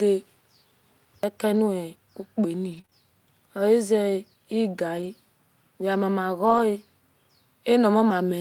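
Between 1.55 and 2.95 s the speech has scattered short gaps: roughly three small holes, the longest around 30 ms, patched by extending the preceding sound. Unlike error-correction repair, each patch smears or ticks briefly rather than sounding coarse.

At 4.97 to 5.07 s and 6.45 to 6.59 s, a lost packet is rebuilt from error correction, covering 60 ms and then 80 ms. There is no hole or tick. Instead the speech turns briefly grainier and noisier, because those stretches come from low-bitrate copies.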